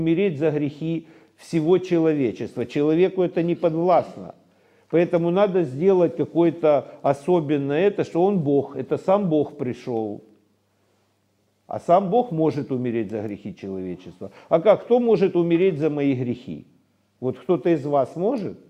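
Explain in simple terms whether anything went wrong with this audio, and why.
Nothing went wrong here; there's no glitch, dropout or other technical problem to point to anywhere in the recording.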